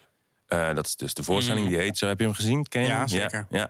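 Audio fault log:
0.00–0.07 s, echo leak: likely a far-end echo canceller letting loudspeaker pickup through; a very faint copy of the speech returns about 378 ms late.
1.88–1.97 s, echo leak: residual loudspeaker pickup likely escaped the far-end echo canceller again, so a brief delayed scrap of speech returns about 356 ms late, roughly 15 dB below the speech.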